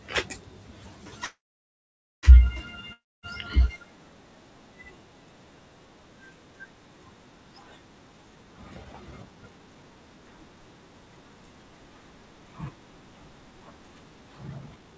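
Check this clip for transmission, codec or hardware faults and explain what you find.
Four transmission faults are audible in this speech clip: one call audio freeze, one long network dropout, and two stretches of jitter buffer speed-up. The band-limit of the G.722 call path, with nothing above 8 kHz, is also visible.

From 1.25 to 2.26 s there is a call audio freeze. A brief fading buzz gives way to about 0.87 s of silence, and then speech resumes with nothing lost. The likely cause is delayed packets draining the jitter buffer. On the waveform this appears as a near-flat gap of about one second. The spectrogram shows a short smeared tail before the gap.

From 2.93 to 3.26 s there is a long network dropout. A short decaying fill runs into about 0.24 s of silence, and when the sound returns roughly 0.3 s of speech is gone. The likely cause is that packets never arrived. The spectrogram shows a blank column, and the speech contours before and after it do not join up.

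From 8.36 to 9.91 s there is a jitter buffer speed-up. The receiver trimmed pitch-period slices to reduce its excess delay. Speech runs at about 113% speed with unchanged pitch, which sounds hurried. About 0.2 s of audio is removed in total. Formant tracks on the spectrogram look compressed in time, while the harmonic spacing stays the same.

From 14.48 s to the end there is a stronger jitter buffer speed-up. It runs at about 163% and removes around 0.3 s of audio. This sounds noticeably rushed. The waveform shows tightly packed syllable envelopes.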